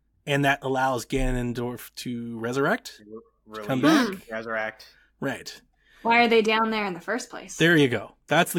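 No technical faults detected.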